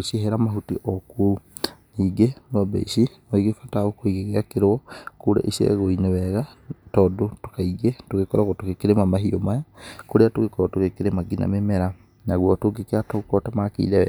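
Nothing here calls for comment: the speech runs along with no technical faults to point to anywhere in the recording.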